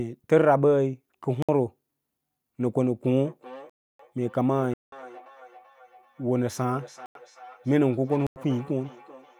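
At 1.42 s the speech drops out for about 62 ms in a block of digital silence, where the output was likely filled with zeros because the program missed its buffer deadline. It cuts hard to nothing and back. From 3.24 s to the end there's feedback echo between two devices: a second device in the room replays the call, its sound gets picked up again, and everything comes back roughly every 0.4 s, peaking at about 20 dB under the speech. The silence blocks continue through the echo, at 3.70 to 3.99 s, 4.74 to 4.92 s, 7.06 to 7.15 s and 8.27 to 8.36 s. The 186 ms gap fits an 8192-sample buffer, and the two 93 ms gaps fit 4096-sample ones.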